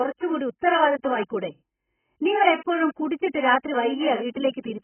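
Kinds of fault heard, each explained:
AAC compression, throughout: The speech has nothing above 3.1 kHz and heavy codec damage, so it sounds dull and muffled, with smeared, warbling sibilants and a fizzy edge on sustained sounds. The likely cause is AAC-LC coding at a very low bitrate, probably around 11 kbps. At that rate the encoder cuts the upper spectrum away and quantises the remaining frequency lines so coarsely that gaps and noisy fill replace real detail.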